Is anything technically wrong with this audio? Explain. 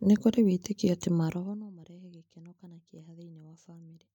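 No, nothing is technically wrong.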